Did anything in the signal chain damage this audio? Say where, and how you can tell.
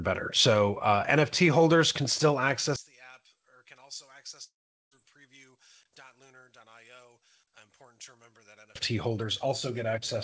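Yes. From 2.76 s to 8.75 s the sound drops by about 21 dB and turns faint. The centre of the image largely disappears, leaving only what differs between the two sides. This points to one channel inverted, likely from a reversed wire pair or a polarity flip in the channel mapping. When the channels are combined, the shared content cancels. Normal level returns at 8.75 s, when the polarity issue ends.

The second fault is at the network stage and falls inside that span. At 4.44 s the sound turns into a brief, fading buzz, then about 0.41 s of near silence, and resumes at 4.93 s. Roughly half a second is missing. This is a long network dropout, with packets that likely never arrived. The receiver's concealment stretched the last sound before giving up. The call path's band limit, with nothing above 8 kHz, applies to the whole clip.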